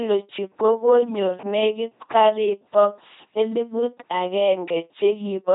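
Throughout, the speech has passed through an LPC-10 vocoder, consistent with a 2.4 kbit/s link, which rebuilds each moment from a pulse train or noise through a short filter. The result is a heavily damaged, buzzing robotic voice with misplaced buzz and hiss, and nothing above 3.8 kHz.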